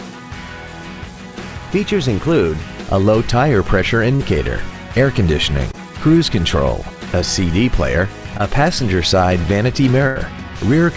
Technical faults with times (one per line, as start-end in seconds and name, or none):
4.16-4.21 short concealed packet loss
5.71-5.75 short concealed packet loss
8.37-8.41 short concealed packet loss
10.07-10.17 burst of packet loss